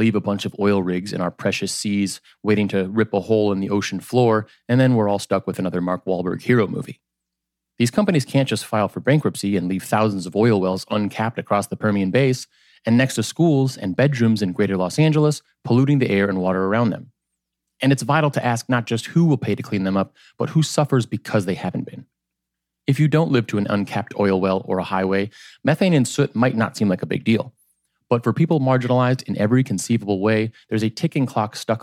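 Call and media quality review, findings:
No audible faults found in the speech; nothing to log against any component.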